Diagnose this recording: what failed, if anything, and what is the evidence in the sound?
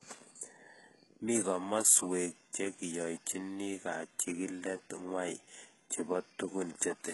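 The codec stage failed. The speech has heavy coding damage throughout, with nothing above 11.5 kHz, and the upper band sounds synthetic, gritty and lispy on sibilants. This is HE-AAC compression, likely at a very low rate around 12 kbps. The lower spectrum is coded directly and the treble is rebuilt by copying lower bands upward under a coarse envelope. On a spectrogram, the top band shows smeared, repeated-looking patches with harmonics that don't continue across the crossover, and it stops flat at 11.5 kHz.

There is pre-echo at 2.53 s, a short hiss about 15 ms long just before "che kiyoichini kachikilet ngwai", which makes that onset sound soft. This is also the codec stage. The transform block spread its quantisation noise, sized for the loud attack, evenly across the block, so the noise filled the near-silent stretch ahead of it. On a waveform, a low noise floor rises before the transient. 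On a spectrogram, a thin broadband smear leads the onset.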